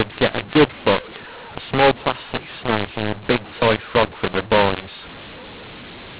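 From start to finish, this speech has a mu-law and A-law mix-up: the telephone audio was encoded with A-law but decoded as mu-law. Since the two logarithmic curves don't match, every sample lands at the wrong level. Some are pushed up, others pulled down, and the quietest ones jump well above silence. You get a harsh, gritty distortion over the speech, and the gaps between phrases fill with hiss. It's all still squeezed into the narrow G.711 telephone band, with nothing above 4 kHz.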